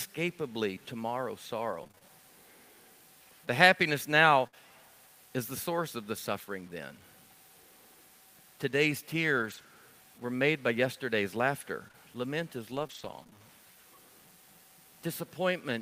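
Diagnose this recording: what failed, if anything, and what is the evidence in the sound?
Low bit depth without dither, likely from sample-format conversion: grainy distortion follows the speech throughout, about 30 dB down, which fits truncation to 9 bits.

Scattered short gaps on the network side: about seven brief ticks and smears in each stretch, from 1.71 to 4.56 s and again from 9.38 to 13.40 s, each patched by continuing the last sound.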